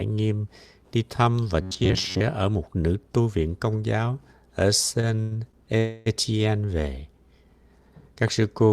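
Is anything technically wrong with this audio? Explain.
Yes. This speech clip has four distinct faults.

From 1.62 to 2.22 s, right after "nghiêm đi thăm và", there is robotic sound from repeated short buffers. Roughly half the audio is a looped fragment of about 10.7 ms, most likely because audio arrived too seldom and the last buffer was replayed. This imposes a rigid, metallic buzz at about 94 Hz. A spectrogram would show evenly spaced horizontal harmonic lines at multiples of 94 Hz, and the waveform would show identical repeating cycles.

From 5.01 to 5.55 s, after "viện công giáo ở", repeated stalls (stutter) occur. Late packets drained the jitter buffer four times, and the receiver filled 151 ms in total, up to 100 ms at once, by extending the last sound. Nothing is lost, but the speech drags and hiccups. The spectrogram would show smeared, frozen stretches of the same spectral slice.

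From 5.77 to 6.08 s, a call audio freeze fills 285 ms, likely caused by packets held up in transit. The last sound is stretched into a fading buzz or hiss rather than silence, and speech then resumes where it stopped, now 285 ms later. This appears as one longer smeared, decaying band on the spectrogram.

From 8.28 to 8.30 s, there is a single loud pop, likely a voltage step or pulse added to the signal. It peaks at about 5 dB above the surrounding audio, with the speech continuing underneath. The waveform would show a sharp spike, and the spectrogram a thin broadband vertical line.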